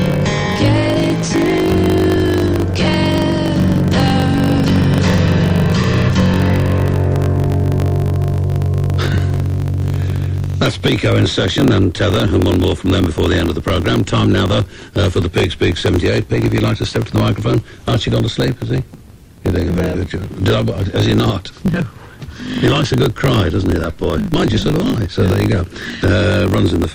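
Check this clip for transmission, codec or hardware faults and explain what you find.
One fault runs through the whole clip: a block size mismatch with truncation. Throughout, a steady buzz sits at 50 Hz, the block rate. One stage writes longer blocks than the next reads, which fits 1024-sample blocks being written. The end of each block is dropped, so every block boundary carries a small discontinuity that repeats as the buzz. Because material is discarded, the audio plays about 1.07 times fast while keeping its timbre.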